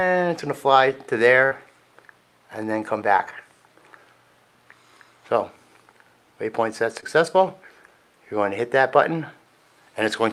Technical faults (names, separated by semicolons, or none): burst of packet loss; short concealed packet loss